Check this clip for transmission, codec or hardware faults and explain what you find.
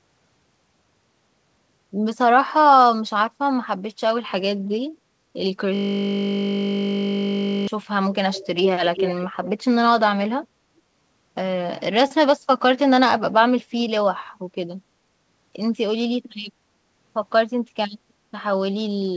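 Two faults stand out in this speech clip, heard over a call path whose band stops at 8 kHz, consistent with G.722.

System hang loop, 5.75 to 7.68 s: the computer or audio driver stalled while the sound hardware kept replaying the same stretch of its ring buffer. That stretch is 20 ms long and cycles about 96 times, so instead of speech there is a steady buzz at 50 Hz, the loop rate, lasting nearly two seconds before normal audio resumes.

Echo leak, 8.32 to 8.47 s and 8.95 to 9.27 s: a delayed copy of the speech returns about 356 ms behind the original. This is likely a far-end loudspeaker being picked up by that side's microphone, with the echo canceller failing to remove it so it is sent back down the call. The first scrap is faint, well below the speech. The second is much stronger, nearly as loud as the speech itself.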